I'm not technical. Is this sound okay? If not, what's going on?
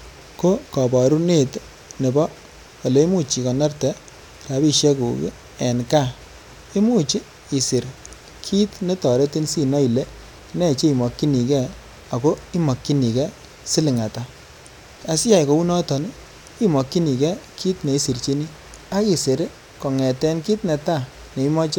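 Yes, nothing stood out as a problem when listening to this recording.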